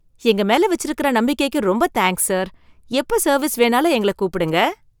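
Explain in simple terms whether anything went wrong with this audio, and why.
A mobile phone nearby was signalling to its network, and the recording equipment picked up its radio bursts. These GSM signalling bursts are heard from 3.39 to 4.59 s as a faint, galloping dit-dit-dit of short buzzes, each buzz pitched at about 217 Hz, underneath the speech.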